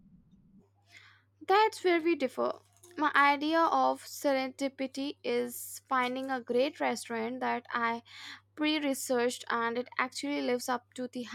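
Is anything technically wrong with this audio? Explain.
No, nothing technically wrong turns up here; the recording holds together fine and there's nothing to flag.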